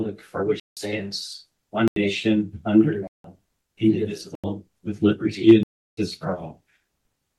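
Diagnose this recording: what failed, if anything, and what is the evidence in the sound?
Driver or buffer stage: blocks of digital silence, cutting out and back in with no fade at 0.60, 1.88, 3.07, 4.35 and 5.63 s. Output buffers likely weren't filled in time; the gap lengths fit multiples of a 4096-sample buffer.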